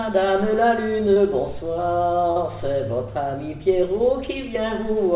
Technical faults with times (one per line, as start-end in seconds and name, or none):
1.14-1.18 short concealed packet loss
2.32-2.38 short concealed packet loss